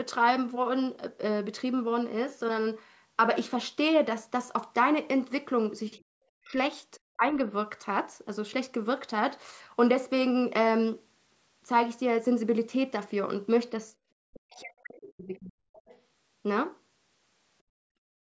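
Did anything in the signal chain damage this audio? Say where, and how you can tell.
Yes. The speech ducks sharply at 5.96–6.05, 6.39–6.56 and 7.17–7.38 s, and for over a second at 14.29–15.56 s. This is likely speech suppressed in double talk by the call's echo canceller.

The background sound is briefly pushed down by about 18 dB at 13.95–14.01 s, and by about 33 dB from 17.63 s to the end. This is background gated by the echo canceller while the loudspeaker was active.

A faint second voice, far below the main speech, comes through at 15.73–16.01 s. This is likely the other side's voice leaking through, left behind by incomplete echo cancellation.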